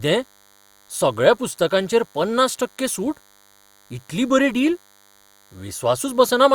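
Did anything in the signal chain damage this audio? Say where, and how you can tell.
Yes. A DECT cordless phone buzz runs under the speech for the whole clip, picked up in the analogue wiring: radio bursts repeating at 100 Hz are rectified into a thin, harmonic-rich buzz roughly 35 dB below the speech. Mains hum would sit at 50 or 60 Hz and sound smoother.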